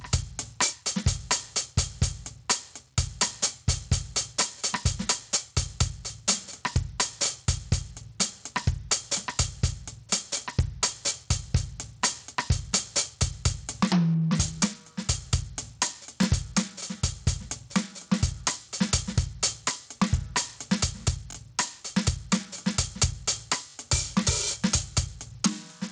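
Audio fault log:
throughout: gain pumping. The music sits under a gain swinging by roughly 15 dB, so loud and quiet parts end up squashed close together. That breathing pattern is what you get when the input gain is far too hot and a fast limiter or compressor keeps yanking it back down, which is the likely cause here.
throughout: Bluetooth SBC compression. The treble flickers and drops out, and there's a gritty, aliased noise riding on the music. That's the sound of a coarse sub-band codec starving its upper bands of bits, and at around 80 kbps the damage is plainly audible. SBC, the default Bluetooth music codec, with its simple bit allocation and no proper hearing model, fits it well. Separately, nothing comes through above 8 kHz, in line with call-style microphone processing.
16.24 s, 21.31 to 21.36 s, 23.70 to 23.74 s: repeated buffer. Each spot is a quick stutter, almost a brief buzz, where the same tiny slice plays again with a hard join. 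It's one extra play at 16.24 s and two extra plays at each of the later two. Each repeated piece lasts about 21 ms, which fits a 1024-sample buffer being replayed because fresh audio didn't arrive in time. Nothing seems to go missing; the music just hiccups in place.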